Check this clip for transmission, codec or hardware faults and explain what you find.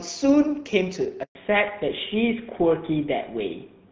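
Two transmission faults turn up in this speech clip, a dropout followed by a permanent loss of bandwidth.

From 1.23 to 1.35 s the sound stops for about 120 ms and then returns. This is a handover gap: the call was being passed from one network link to another, and no speech frames reached the receiver during the switch. The audio fades within a few tens of milliseconds, stays silent until the new link begins carrying frames, and whatever was said in that span is lost.

From 1.35 s to the end, the audio sounds duller and rougher, with nothing above 4 kHz. This is a fallback to narrowband. Up to the dropout the call ran on the AMR wideband (HD Voice) codec, whose clarity and light coding damage fit a rate around 12.65 kbit/s. After the handover the new link carries only a narrowband codec, and the character of the sound points to GSM full rate at about 13 kbit/s. That codec cannot represent anything above 4 kHz, so the upper speech band is removed for the rest of the call.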